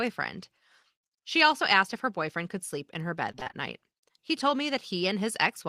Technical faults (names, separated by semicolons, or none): repeated packet loss (robotic sound)